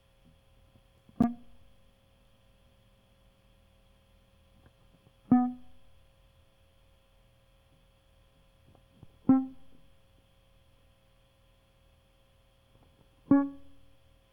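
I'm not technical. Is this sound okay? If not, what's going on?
No. There is a gap at a join of encoded pieces at about 1.22 s: the music drops out for roughly 12 milliseconds and then carries on exactly where it stopped. The music appears to have been saved in separate pieces and glued together untidily. Each saving step adds a sliver of silence at its start and pads its end, and both were left in, so you hear a tiny hole with softened edges.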